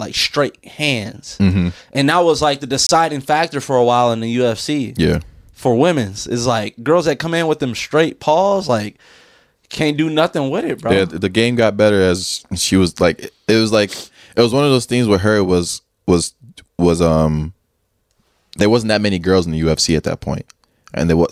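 A Bluetooth stall at 2.87 s to 2.89 s drops the speech into silence for about 24 ms before it resumes. The likely cause is interference delaying packets on the wireless link, so the headphones' buffer emptied and playback paused until the retransmitted audio came through.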